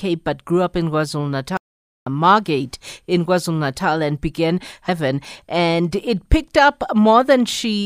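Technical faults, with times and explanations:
1.57–2.07 s, playback stall: the speech cuts off mid-flow and the output stays silent for about 0.49 s before resuming. This is likely the player running short of data or being blocked. The waveform shows a flat gap, and the spectrogram shows an empty vertical band.
4.88 s, stream segment skipped: just after "and began" the speech jumps abruptly forward with a brief blip, likely because one stream segment failed to load and the player moved on. The waveform shows a hard discontinuity, and the spectrogram shows a thin broadband click where the spectrum changes.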